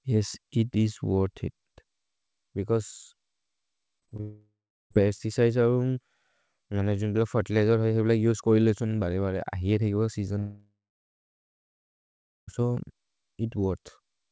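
From 4.00 to 4.21 s the speech turns choppy. This is repeated packet loss (robotic sound): four short holes, none longer than about 19 ms, are each patched by repeating the last sound. Unlike a dropout, the speech keeps resurfacing between the gaps. It runs straight into the first of two long network dropouts, each likely caused by the connection stalling. From 4.21 to 4.92 s a fading buzz gives way to about 0.36 s of silence, and the speech resumes with that stretch missing. The second, from 10.38 to 12.49 s, fades into about 1.73 s of silence. Through the G.722 call path, nothing is heard above 8 kHz.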